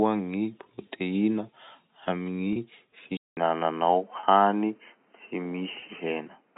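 At 2.53 to 2.56 s, packet loss with pitch repetition leaves a 30 ms gap bridged by repeating the last pitch period. It sounds like a brief buzzy hold, and on a spectrogram the harmonics freeze into flat, evenly spaced lines.

From 3.17 s the sound turns dull and boxy after a 200 ms silence, likely an input switched to a poorer device. The spectrogram shows the band cut off above 3.1 kHz and a new noise floor roughly 40 dB down, while the waveform level stays about the same.

The same packet-loss concealment returns at 4.20 to 4.23 s (30 ms) and 5.80 to 5.82 s (20 ms), with the same short frozen stretches.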